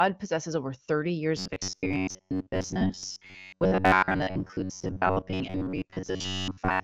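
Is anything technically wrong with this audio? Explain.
Yes. From 1.37 s to the end, the speech turns into a rigid metallic buzz at 93.8 Hz. This robotic sound from repeated short buffers is likely caused by audio arriving too seldom, with a roughly 10.7 ms chunk looped in place of most of the real audio. Unlike the raspiness of a low-bitrate codec, the buzz comes at a fixed rate. The AMR wideband (HD Voice) band limit, with nothing above 7 kHz, is also present.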